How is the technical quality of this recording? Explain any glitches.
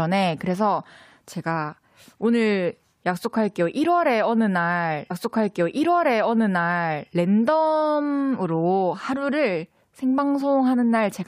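The recording has one clear glitch: a stream segment repeated. At 5.10 s the speech jumps back and replays a stretch of about 2.0 s, ending at 7.09 s. The player fetched or queued the same chunk of the stream twice, so that piece of the programme is heard again. A small blip marks the jump back, where the waveform is spliced without a match. The clip runs about two seconds longer than it should.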